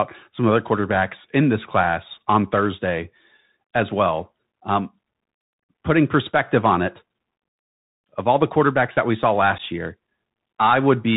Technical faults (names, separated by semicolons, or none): Bluetooth CVSD headset codec; unconcealed Bluetooth headset packet loss